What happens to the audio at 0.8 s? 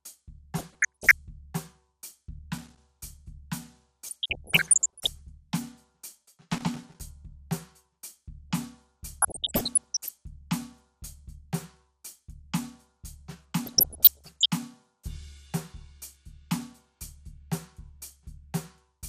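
Between 0.58 and 1.11 s the music bubbles with blips of noise in single frequency bands. This is DAB burbling: weak reception let bit errors slip past error correction, corrupting samples in a run of MP2 frames.

Underneath, the whole clip sounds dull and gurgling, with a grainy, coarse texture in what remains of the top end. That is MP2 compression, likely from a low bitrate near 80 kbps starving the upper sub-bands so they drop out and flicker.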